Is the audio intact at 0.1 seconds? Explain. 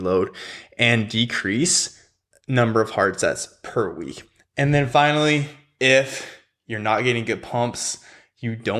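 Yes, the audio is intact at 0.1 seconds, with no audible fault at that moment.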